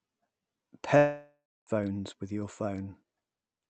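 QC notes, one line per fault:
0.97–1.69 s, long network dropout: the speech stops arriving for about 0.7 s and the receiver covers the gap by extending the last sound, which decays into a fading buzz or hiss before settling into roughly 0.3 s of near silence; the audio then resumes with the missing stretch simply gone rather than delayed. This is likely a run of lost packets on the call path, with concealment stretched past what it can plausibly rebuild, audible here against the Opus coding, band-limited to 8 kHz.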